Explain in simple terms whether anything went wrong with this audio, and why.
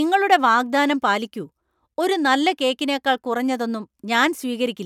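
Nothing went wrong with this speech recording. Listening closely, there is no technical fault to point to at any moment.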